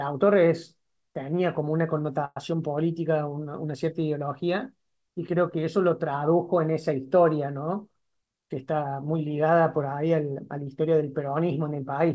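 At 2.25 s a call audio freeze, likely from delayed packets, stretches the last sound into a fading buzz until 2.37 s; the spectrogram shows a smeared band ending in a brief blank gap. From 7.82 to 8.93 s a jitter buffer speed-up trims pitch periods, about a tenth of a second in total, so the speech runs 10% faster at unchanged pitch, with a compressed waveform. Throughout, the G.722 call codec leaves nothing above 8 kHz.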